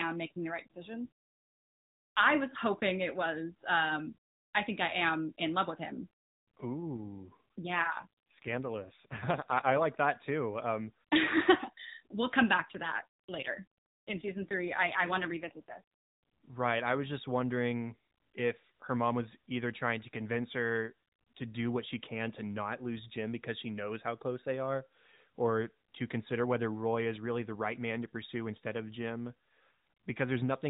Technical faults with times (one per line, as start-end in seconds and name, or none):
6.06-9.87 AMR rate drop
12.58-15.82 AMR rate drop